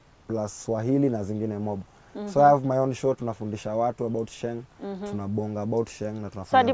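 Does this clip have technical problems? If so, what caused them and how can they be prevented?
No, nothing stood out as a technical problem on listening, so there is nothing here that needs preventing.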